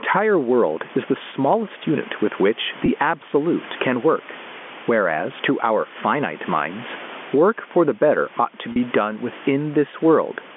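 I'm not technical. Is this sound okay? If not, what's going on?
No. Two things are going on.

The first is gain pumping, and it runs through the whole clip. Loud and quiet moments end up squashed close together. The likely cause is the microphone gain set far too high, with an automatic level control yanking it back down on each loud sound.

The second is packet loss with pitch repetition, at two spots. At about 2.86 to 2.88 s a tiny piece of the audio, about 20 ms, went missing, and at 8.72 to 8.76 s a longer piece, about 40 ms, which fits two lost packets. To cover each gap, the receiving end repeated the last bit of the voice's pitch and faded it out. You hear that as a brief held, slightly buzzy note before the speech picks back up.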